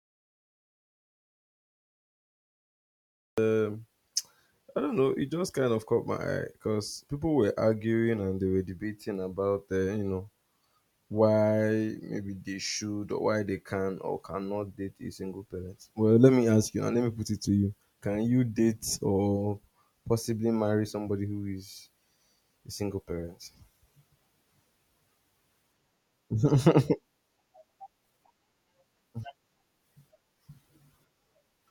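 A speech recording opens with an audio dropout to silence already in progress: from the first instant until 3.38 s there is nothing but silence, with no room tone, hiss or breath, and the speech then begins abruptly mid-flow. The likely cause is a lost input, such as a disconnected device, failed link or stray mute, while recording continued. A natural pause or noise gate would leave some floor or a gradual onset, not this dead, hard-edged gap.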